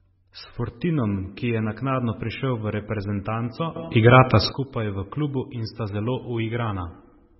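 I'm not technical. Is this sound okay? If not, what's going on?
No. MP3 compression affects the whole speech clip, likely from squeezing it into a very small file. The encoder kept only what it judged most important, cutting everything above about 5.6 kHz and dropping quieter detail, so the voice sounds dull, watery and swirly.

A sudden gain jump runs from 3.76 to 4.52 s, just after "naknadno prišel v reprezentanco" and before "skupaj v klubu". The volume, background noise included, leaps up abruptly and then drops back, likely a level setting switched instantly instead of faded.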